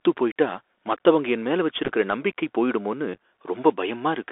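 Throughout, the speech carries Bluetooth CVSD headset codec damage: the line confines it to roughly 300 Hz–3.5 kHz, and one-bit delta coding adds scratchy sibilants and granular hiss, with an empty spectrogram above 3.5 kHz. At 1.84–1.89 s, between "போயிட்டா மத்தவங்க என் மேல" and "நம்பிக்கை போயிடுமோனு", and at 3.14–3.18 s, just after "நம்பிக்கை போயிடுமோனு", unconcealed Bluetooth headset packet loss punches scattered holes of up to 7.5 ms into the audio. They sound as a crackly, chopped roughness and appear as abrupt vertical gaps in the waveform.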